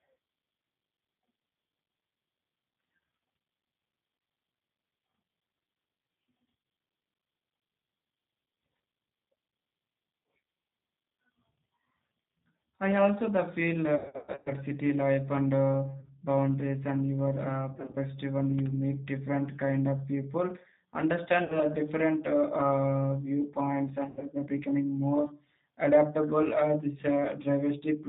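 The whole speech track has gone through the G.729 codec at 8 kbit/s, and the damage is plainly audible. Nothing above 4 kHz survives, so everything sounds band-limited and a bit rough and synthetic, because the decoder is rebuilding each stretch from a vocal tract filter, a pitch guess and a handful of pulses rather than the actual waveform.

On top of that there's VoIP packet loss concealed by the speech codec, six times. At 3.17 to 3.27 s, about 50 ms of audio is missing, scattered across 100 ms. The worst is 13.96 to 14.53 s, where about 380 ms drops out across half a second, with a run of 120 ms. Then come short hits at 16.00 to 16.10 s and 17.73 to 17.97 s, then 21.44 to 21.61 s and 24.05 to 24.26 s. Each time the decoder stretches its last pitch and filter into a buzzy tone or coloured noise that fades, and the sound stays weak or smeared briefly after real packets return.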